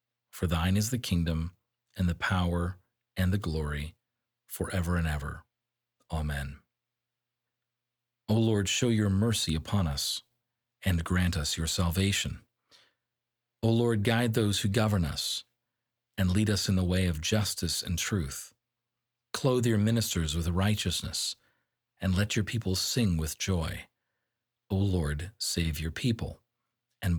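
A listener hears no technical fault in this speech recording; the signal stays steady and intact throughout.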